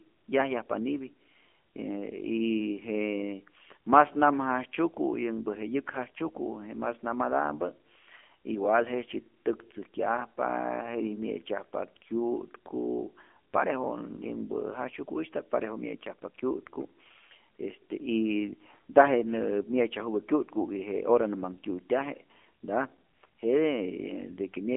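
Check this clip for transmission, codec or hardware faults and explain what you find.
One codec fault runs through the whole speech clip. AMR narrowband mobile codec, throughout: a vocal-tract model excites each frame with a few pulses, discarding everything above 3.4 kHz and below 250 Hz, so the voice sounds thin, buzzy and synthetic. The damage is plainly audible, which fits a low mode around 7.4 kbps.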